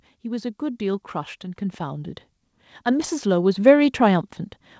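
From 0.22 s to 4.05 s, automatic gain rising lifts the speech and its background together by about 10 dB, the control slowly compensating for input it judged too quiet.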